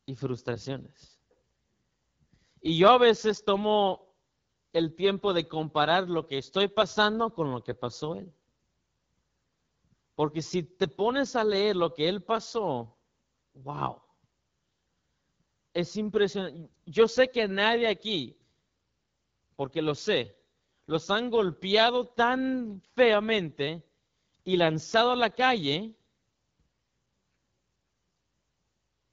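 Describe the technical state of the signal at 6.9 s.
At 6.9 s the speech carries AMR wideband (HD Voice) codec damage, present throughout the clip. The coarse pulse-driven model leaves it plainly rough and raspy, which fits a low rate near 8.85 kbit/s. Nothing is heard above 7.5 kHz.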